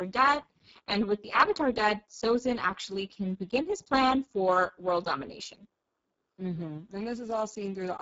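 Speex codec damage runs through the whole clip, from start to finish. The speech has been squeezed through this CELP coder at a very low rate, which fits a setting near 6 kbps, leaving few bits to describe the excitation. The result is heavy: the speech sounds hoarse and noisy. The top end is only a shaped noise fill rather than real detail, and nothing is present above 7.7 kHz.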